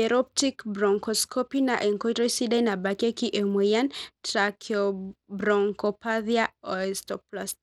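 From start to finish, the speech carries a gritty, grainy coating. The upper treble thins out and flickers in and out rather than holding steady. Metallic aliasing rides on the sound. The likely cause is Bluetooth SBC compression at a low data rate. The damage fits a setting near 96 kbps. At that rate, the simple bit allocation leaves the weak top sub-bands starved of bits. The remaining bands are coarsely quantised, so the damage is plainly audible.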